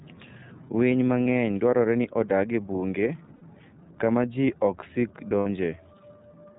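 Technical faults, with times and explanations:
Throughout, iLBC codec: The speech passes through the narrowband iLBC codec, which codes each frame's excitation independently. The roughness and frame rhythm fit its 13.33 kbps mode with 30 ms frames. Everything above 4 kHz is removed, so consonants lose their crisp top end and the voice sounds boxed in. The coding damage is plainly audible as a rough, slightly synthetic grain on every syllable.
1.23–1.26 s, 3.35–3.43 s and 5.40–5.47 s, lost iLBC frames: Packets went missing, and the decoder filled each gap by repeating the last pitch cycle mixed with noise. The first gap lasts 30 ms and the other two 60 ms each, which points to one and then two dropped 30 ms frames. Each gap is heard as a brief held, buzzy vowel where the speech should move on. Because iLBC frames stand alone, the voice recovers almost immediately afterwards.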